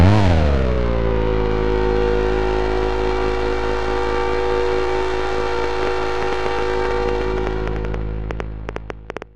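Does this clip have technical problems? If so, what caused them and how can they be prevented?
Yes. A train of clicks runs from 5.64 to 9.23 s: about thirty similar pops at an uneven 6.7 per second, well above the sound, likely interference or a faulty connection or power supply. Keep cables away from other equipment and use a stable, properly powered interface.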